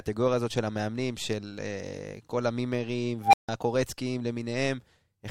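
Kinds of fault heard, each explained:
Unstable filter: a recursive filter running on bad coefficients feeds back on itself, so a tone near 700 Hz swells over about 96 ms from 3.24 s, clips, then overflows and drops to silence for about 155 ms. A spectrogram shows a brightening horizontal line, then a blank gap; the waveform balloons until it clips, then flatlines.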